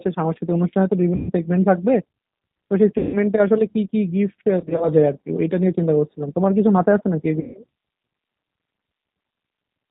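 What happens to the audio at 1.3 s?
From 1.16 to 1.32 s there is VoIP packet loss concealed by the speech codec. About 130 ms of audio never arrived, so the decoder kept repeating its last pitch period and vocal-tract filter at falling gain. This stretches the speech into a buzzy tone or coloured noise that fades, and the voice stays weak for a short time after packets resume.

Underneath, the G.729 codec at 8 kbit/s is plainly audible. It rebuilds the speech from a filter, a pitch predictor and a few pulses per frame and drops everything above 4 kHz, which leaves the speech muffled, slightly rough and synthetic.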